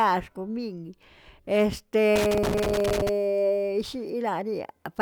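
From 2.16 to 3.09 s there's a burst of loose connector crackle: a worn or dirty contact somewhere in the chain keeps making and breaking as it shifts, chopping the speech, so you get a ragged, scratchy crackle for nearly a second.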